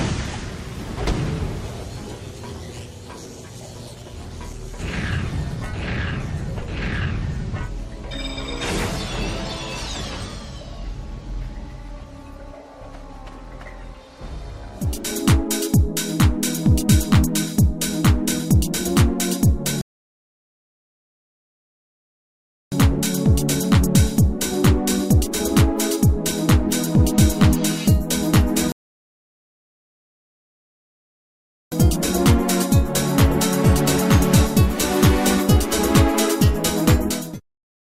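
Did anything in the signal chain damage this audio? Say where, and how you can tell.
Yes, at playback, in two rebuffering stalls. The sound drops to silence at 19.81 s and picks up again at 22.72 s, adding 2.9 s. It stops again at 28.72 s and resumes at 31.72 s, adding 3.0 s. Each time it continues exactly where it left off, with nothing skipped. The player emptied its buffer of downloaded audio and waited for more to arrive. Nothing is lost, but time is added.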